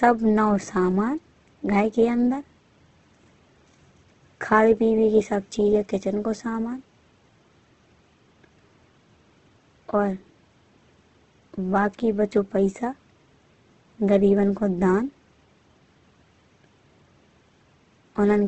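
From start to finish the speech sounds grainy and rough, with nothing above 8.2 kHz, but without the swirling holes of MP3. That points to heavy Opus compression, likely in CELT mode near 12 kbps, filling starved bands with noise.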